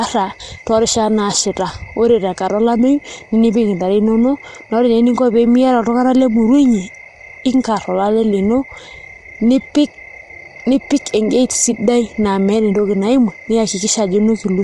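Throughout, the speech sounds rough and grainy, likely from low-delay AAC compression; a spectrogram shows noise filling between harmonics and nothing above 11.6 kHz.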